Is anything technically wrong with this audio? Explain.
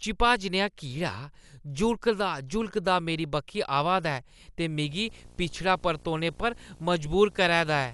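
Yes, two things. Throughout the speech it sounds dull and band-limited, with nothing above about 11.4 kHz and a rough, fluttery noise clinging to voiced sounds. That's likely Dolby Digital compression at a low bitrate, around 64 kbps: the encoder chops the top band and leaves many frequency lines without bits, so the decoder fills them with dither noise.

From 4.87 s to the end there's video or display buzz. A screen or video cable is coupling into the audio, giving a 59.94 Hz buzz at the field rate with hash above it, plus a thin 15.7 kHz line-rate whine, sitting roughly 25 dB under the speech.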